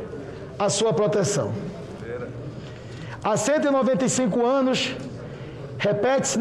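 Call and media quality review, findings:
No audible faults detected.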